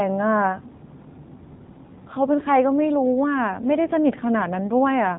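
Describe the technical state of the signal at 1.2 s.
At 1.2 s, as throughout the clip, the speech carries AMR narrowband mobile codec damage: a vocal-tract model driven by sparse pulses, at a buzzy quality consistent with a low rate near 7.4 kbps. A spectrogram shows a hard ceiling at 3.7 kHz, with nothing above it.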